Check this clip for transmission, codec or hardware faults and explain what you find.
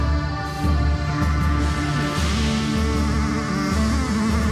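One fault is present, running through the whole clip: a wrong sample rate. The audio plays at exactly twice its proper speed, and its pitch is raised by 12 semitones, a full octave. Speed and pitch have shifted together by the same factor of 2.0, which points to samples recorded at 16 kHz being played back at 32 kHz with no rate conversion. Every event arrives in half the expected time, and the sound comes across as high and hurried throughout.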